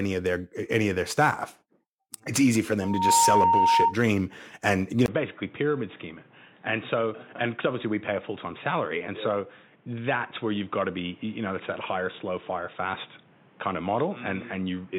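From 2.81 to 3.96 s there's loudspeaker feedback squeal: a 924 Hz tone swells up over about a third of a second and howls roughly 5 dB above the speech. At 5.06 s, after a 20 ms gap, everything above 3.8 kHz disappears, the level drops about 5 dB, and a new noise floor sits roughly 30 dB down. That's likely the input switched to a poorer device, and it stays that way to the end.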